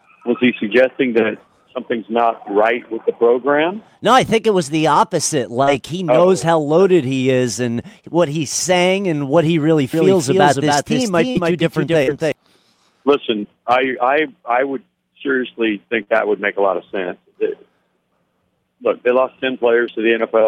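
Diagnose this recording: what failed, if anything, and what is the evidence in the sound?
Short concealed packet loss, at 5.63–5.70, 11.31–11.38, 12.03–12.10, 13.39–13.46 and 16.03–16.10 s. This is a network-stage fault: each time about 40 ms of audio arrived too late, and the decoder bridged the gap by extending the preceding sound before fading back, leaving a brief smear or wobble.

Doubled audio track, from 9.94 to 12.32 s. A full-band copy trails the original by roughly a third of a second, about 5 dB quieter, with no reverberant tail. It switches on and off abruptly, likely a second capture path or an editing overlap holding two offset copies.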